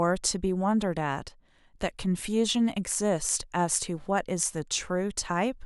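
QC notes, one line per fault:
1.28–1.79 s, one channel drops out: the speech abruptly falls by about 6 dB for roughly half a second, then returns at 1.79 s. The cause is likely the loss of one side of a stereo feed. Once the two sides are summed to mono, sound shared by both channels loses half its contribution, which is exactly that 6 dB step.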